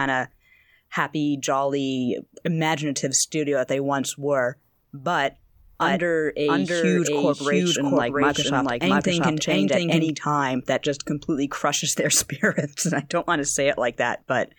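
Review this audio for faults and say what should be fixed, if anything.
Doubled audio track, 5.81 to 10.09 s. An equally loud copy trails about 0.7 s behind and cuts in abruptly, likely a duplicate capture path. Make sure each source reaches the mix through only one path.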